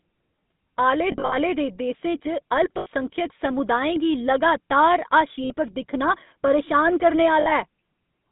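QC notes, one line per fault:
throughout: GSM full-rate codec. The band runs only from about 150 Hz to 3.7 kHz, so the top is dull and boxy. The speech has a plainly audible buzzy, gravelly roughness. This comes from modelling the vocal tract and driving it with a sparse, regularly spaced pulse train, keeping only every third excitation sample. Fine detail in the voice is lost. The sound fits the 13 kbps full-rate codec.
1.12 to 1.37 s, 2.78 to 3.10 s, 5.44 to 5.51 s, 7.40 to 7.52 s: lost GSM frames. At 1.12 s, 140 ms drops out in patches across 200 ms, with the longest gap roughly 70 ms. At 2.78 s, 80 ms is lost. After "गी लगातार", 60 ms goes, and again after "दिक्खना परेशान". Each gap is filled by repeating the last good frame. That is heard as a brief rough, metallic ring.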